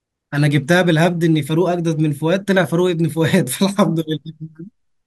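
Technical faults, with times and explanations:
No technical faults detected.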